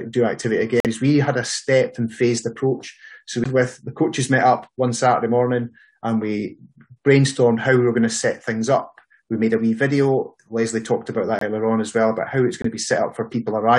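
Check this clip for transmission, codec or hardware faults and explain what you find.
Two kinds of fault are audible: three corrupt frame mutes and one CD skip.

Corrupt frame muted, at 0.80 to 0.87 s, 11.39 to 11.43 s and 12.62 to 12.66 s. The sound cuts off abruptly into silence. The first gap lasts about 66 ms, which fits two lost frames. The later two last about 36 ms each, which fits a single frame. Bit errors damaged compressed frames. The decoder rejected them, and the player filled their length with silence. Timing stays intact after each hole.

CD skip, at 3.44 s. A very brief mute is heard. Then the audio resumes from a different point. A knock or a flaw on the disc threw the laser onto another turn of the spiral. The player muted during the jump and carried on from the new position. The result is a sudden discontinuity in the audio.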